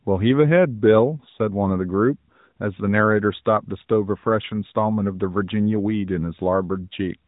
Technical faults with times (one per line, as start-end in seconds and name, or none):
none